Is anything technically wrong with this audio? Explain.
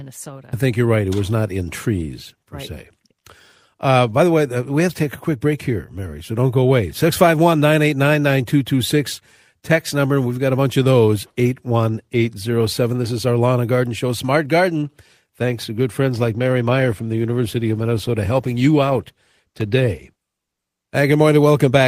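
Yes. From 16.13 to 21.01 s, just after "to good", a call bitrate drop makes the speech rough and muffled. The encoder lost bits and coded coarsely, consistent with a fall from 40 to 18 kbps. The degradation is continuous, without the gaps of packet loss.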